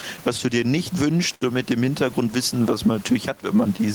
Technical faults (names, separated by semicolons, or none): gain pumping; clock drift between sender and receiver; scattered short gaps; repeated timing corrections; short stall from a late packet